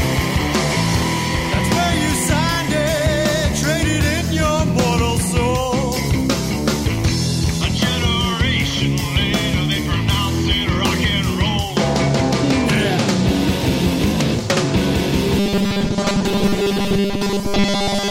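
From 15.39 s to the end at 18.11 s, the audio collapses into a rigid, metallic buzz pitched at 200 Hz, a robotic sound from repeated short buffers that only loosely tracks the original contour. The likely cause is audio arriving too seldom, so playback keeps looping the last fragment of about 5 ms (one cycle of 200 Hz) to fill the gaps. Roughly two-thirds or more of that stretch is repeated material rather than real audio.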